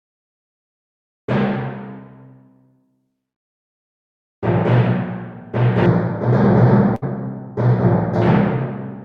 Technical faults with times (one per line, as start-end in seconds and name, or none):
5.86-8.22 channel delay (comb filtering)
6.95-7.04 burst of packet loss